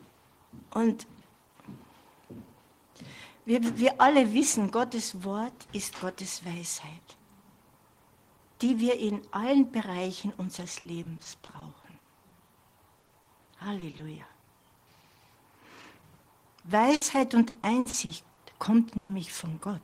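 Repeated packet loss (robotic sound) begins at 10.79 s and runs to 11.85 s. Seven gaps, the longest 60 ms, go missing and are each patched by carrying the preceding sound forward. That is 180 ms, about 17% of the stretch, so the audio turns choppy and mechanical, with fragments dropped out.

Short concealed packet loss follows twice, at 12.29–12.33 s and 12.47–12.51 s. Each time 20 ms failed to arrive in time and the receiver bridged the hole by extending what came just before, then blended back in. Each one comes across as a brief smear or wobble, and a very short sound can drop out entirely.

Repeated packet loss (robotic sound) returns from 12.99 s to 14.01 s. Seven gaps of up to 40 ms, 180 ms in all (about 18% of the span), give the same broken, choppy texture.

A burst of packet loss at 16.95–17.03 s loses 60 ms in a row. The receiver holds the last sound and lets it fade, so a short buzz or hiss stands in for the missing piece before the audio picks up further along.

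Repeated packet loss (robotic sound) is heaviest from 17.49 s to 18.39 s. Six gaps of up to 60 ms add up to 260 ms, about 29% of the stretch, so the chopping and robotic colouring are most pronounced here.

A second burst of packet loss at 18.97–19.11 s removes 120 ms. It is filled throughout by a decaying continuation of the prior sound, with no silence, and then the audio resumes with that section gone.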